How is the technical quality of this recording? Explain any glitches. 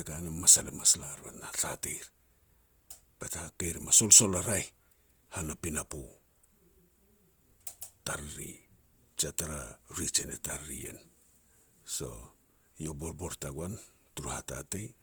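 The recording carries plainly audible coding damage from start to finish, most likely from Opus compression. Throughout, an encoder running in its music (CELT) mode at what sounds like about 24 kbps kept each band's energy but filled starved bands with folded or noise content. The speech therefore sounds rough and grainy rather than swirly, while the full bandwidth is retained up to about 20.1 kHz.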